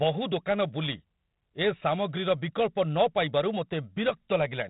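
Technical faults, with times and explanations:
Throughout, 4-bit ADPCM compression: each sample is a coarse 4-bit step from a prediction, so heavy gritty hiss rides on loud speech and sharp attacks distort. Unlike fixed bit reduction, the hiss tracks level; nothing above 3.8 kHz, which fits a 32 kbps stream.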